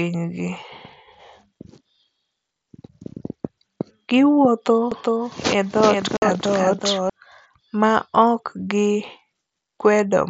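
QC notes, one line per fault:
4.92–7.10 s, doubled audio track: a second full-band copy of the speech runs roughly 400 ms behind the first and sits about 5 dB lower. It adds a flat, dry repeat with no decay or room colour. It switches on and off abruptly at both ends of the range instead of fading. The likely cause is a second, slower capture path or an edit that left two copies of the same material out of step.
6.17–6.22 s, unconcealed Bluetooth headset packet loss: a 52.5 ms hole drops straight into the speech on the headset link, which carries wideband mSBC audio up to 8 kHz. The missing audio packets were replaced with silence or an idle pattern rather than concealed, so the gap has hard edges. That length points to a short burst of consecutive 7.5 ms frames lost between headset and phone, inside the doubled stretch.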